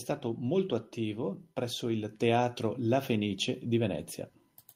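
From 0.22 s to 4.12 s, automatic gain rising lifts the speech and background together by about 8 dB. The waveform envelope widens steadily, and the spectrogram brightens uniformly across frequencies.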